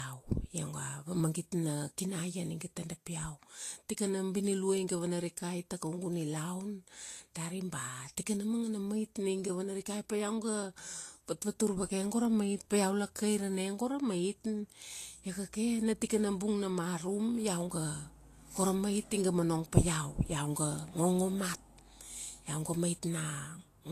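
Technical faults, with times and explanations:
Throughout, low-bitrate audio saved at a high bitrate: the speech was likely coded first at a very low bitrate, which fits a Vorbis stream around 36 kbit/s, then re-saved as high-rate MP3. Nothing sounds above 14.2 kHz, and the first encoding's artefacts and dullness remain.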